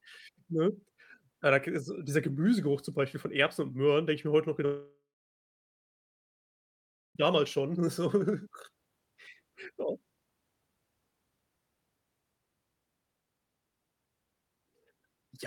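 At 4.65 s, after "ich mir heute noch", the speech decays into a fading buzz, then silence until 7.17 s. This is likely a long network dropout, with about 2.5 s lost.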